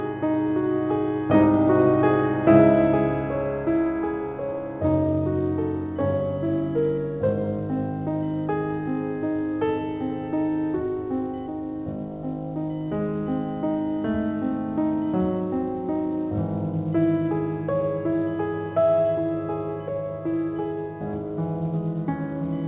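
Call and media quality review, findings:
Computer activity noise, whole clip: faint buzz around 1 kHz, roughly 35 dB under the music, from processor or graphics load disturbing shared audio ground. Spectrogram shows a line near 1 kHz that rises and falls with activity; waveform shows fine ripple.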